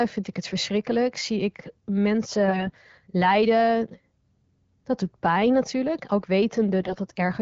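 From 2.46 to 2.72 s, and again from 6.80 to 6.98 s, the speech turns hoarse and gargly. Those are AMR bit errors. On a weak link the less protected bits in each frame got flipped, but the check on the key bits still passed. So the decoder rebuilt sound from misplaced pulses and off pitch, gain and spectral values. Level and pitch roughly hold, but it scratches, a bit worse in the first burst.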